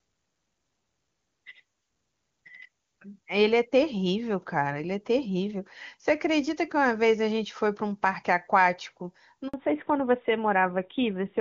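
At 9.48 s the speech drops out for 60 ms, a handover gap where the call switched networks and no speech frames arrived until the new link began. From 9.54 s to the end the voice turns duller and rougher with nothing above 4 kHz, a fallback to narrowband from the clean HD Voice sound heard before it.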